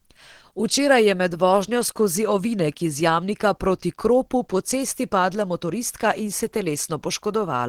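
Throughout, the speech sounds muffled, hoarse and grainy. This is likely Opus compression in its hybrid speech mode, fitting a low bitrate near 16 kbps.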